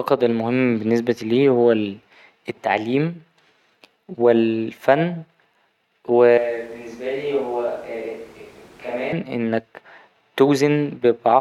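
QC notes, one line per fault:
6.38–9.13 s, switch to a distant microphone: the close mic's signal likely dropped out, leaving a farther pickup to carry the speech. It turns abruptly roomy and hollow with thinner bass and falls about 10 dB. Room noise sits only about 25 dB below it until the sound snaps back.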